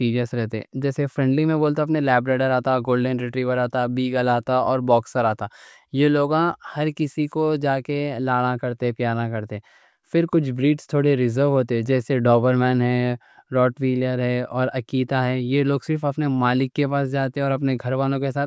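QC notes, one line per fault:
No faults heard in this speech recording.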